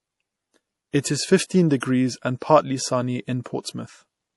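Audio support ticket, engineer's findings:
Swirly, watery speech throughout, nothing above 11.4 kHz. Likely MP3 compression, consistent with about 48 kbps. Weak frequency lines drop out between frames. Fixed treble cut.

Pre-echo: hiss before attacks at 0.91, 1.00 (before "is fifteen"), 1.80 and 3.44 s, 21 to 39 ms. Block-wide quantisation noise fills the quiet before each attack.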